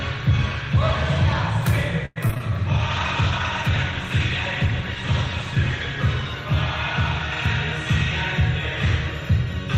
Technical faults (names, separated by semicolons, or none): repeated packet loss (robotic sound); call bitrate drop; jitter buffer speed-up